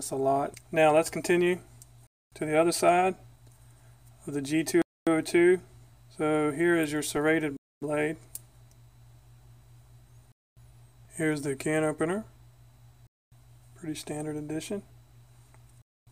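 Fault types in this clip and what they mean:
Gap between chunks: The audio arrives in blocks of about 2.5 s with a 250 ms silent hole after each, starting at 2.07 s and repeating every 2.75 s. Unlike a dropout, nothing is missing. The sound simply stops and resumes where it left off.
DC step: At 7.17 s the waveform's zero line jumps to a new offset and then decays away, as a 20 Hz high-pass would cause. It is heard as a single low thump or click while the sound continues unchanged, which sets it apart from a click caused by damaged samples.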